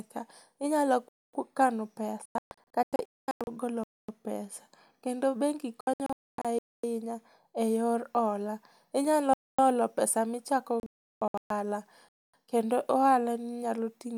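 Speech, interrupted by two kinds of fault. The first is a gap between chunks: five hard-edged silences of 250 ms each, at 1.09, 3.84, 6.59, 9.34 and 12.09 s. They fall every 2.75 s, which fits 2.5 s chunks of audio each followed by padding or a late start. The one at 1.09 s comes just before "ku kano". No sound is missing, but the flow breaks at every join. The second is a digital broadcast dropout, where the receiver mutes when frames go bad and the sound sent meanwhile is lost. It happens three times. From 2.26 to 3.48 s, between "ku kano" and "golo pesa", about 0.8 s goes missing in scattered holes up to 224 ms long. From 5.81 to 6.45 s, about 0.45 s is lost in holes up to 256 ms. From 10.80 to 11.51 s, after "olo pesa michako", about 0.58 s is lost, with the longest hole 352 ms.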